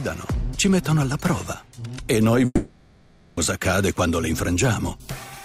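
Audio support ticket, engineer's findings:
2.45–3.39 s: fading buzz fills nearly the whole gap, then audio resumes with content skipped, not delayed; likely long network dropout, receiver concealment.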